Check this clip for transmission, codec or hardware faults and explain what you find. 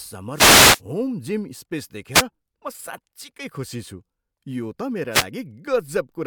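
Short bursts of hiss and static break into the speech three times: from 0.33 to 0.81 s, from 2.13 to 2.23 s, and from 5.11 to 5.25 s, the first the longest at about half a second. These are wireless microphone noise hits. The analogue FM radio link fades briefly when reflected signals cancel at the receiver, so receiver noise swells up and swishes over the voice until the signal recovers.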